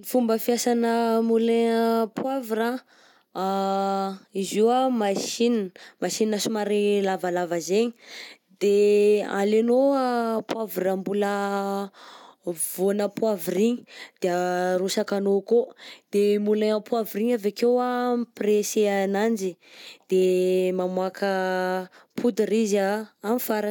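No dropouts, clicks, distortion or timing errors can be heard anywhere in the recording.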